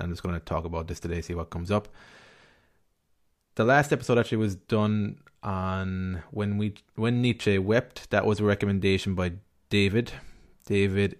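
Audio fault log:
No faults detected.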